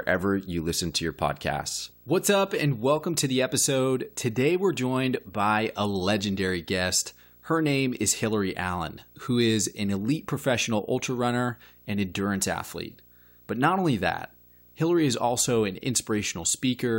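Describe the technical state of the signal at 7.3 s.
At 7.3 s the speech carries video or display buzz, present for the whole clip: a screen or video cable coupling into the audio adds a 59.94 Hz field-rate buzz with hash above it, plus a faint 15.7 kHz line-rate whine, around 30 dB below the speech.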